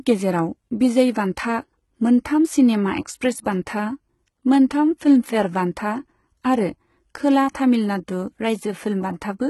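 Throughout the speech, s sounds come out gritty and lispy, and the treble sounds copied up from lower bands and stops at 11.8 kHz. That's likely heavy HE-AAC compression, fitting a bitrate around 16 kbps.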